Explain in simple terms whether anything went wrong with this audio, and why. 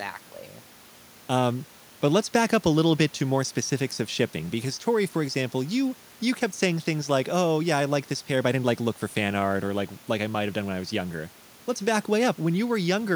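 Nothing went wrong: the recording holds steady throughout, with no audible faults anywhere in the speech.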